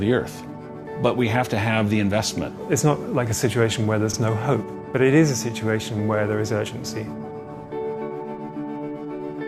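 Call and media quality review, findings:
Repeated frames, 4.13–4.17 s: a 40 ms run of compressed frames, consistent with two frames, written or sent twice. The decoder replays it once more, heard as a stutter, adding 40 ms.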